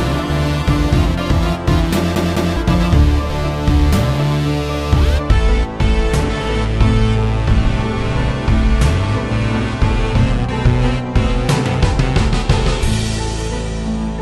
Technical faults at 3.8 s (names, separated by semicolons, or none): none